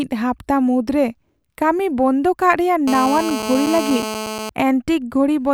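A speech clip with GSM phone buzz: a nearby 2G phone on a call, its bursts rectified by the audio circuitry, adds a steady, raspy 217 Hz buzz from 2.88 to 4.50 s, about 7 dB below the speech.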